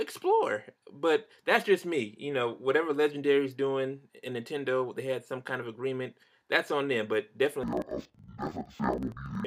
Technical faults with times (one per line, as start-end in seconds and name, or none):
7.63-9.46 interleaved audio read as planar